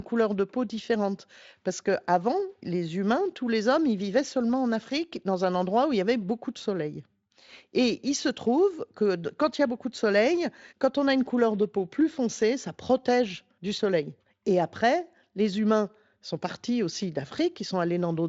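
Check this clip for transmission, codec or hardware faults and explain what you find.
No faults can be heard in this recording.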